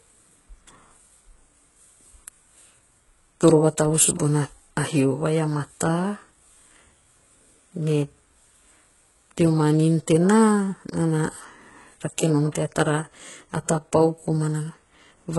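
HE-AAC compression, likely, throughout: the treble is rebuilt from copied lower bands, giving gritty, lispy sibilants, nothing above 11.5 kHz, and heavy damage fitting roughly 12 kbps.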